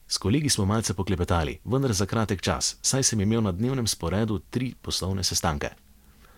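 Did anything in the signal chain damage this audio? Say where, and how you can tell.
No, nothing in the chain from capture to playback has left a mark on this speech that I can hear.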